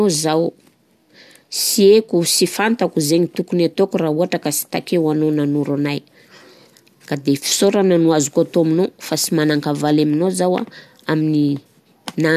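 No technical faults occur at any point in the speech, so there is nothing to describe in time order.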